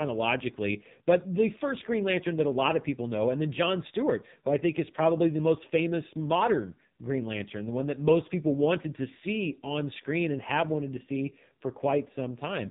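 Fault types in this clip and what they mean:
AMR narrowband mobile codec: the speech cuts off at 3.8 kHz throughout and sounds heavily buzzy and synthetic, not merely muffled as with a plain low-pass filter.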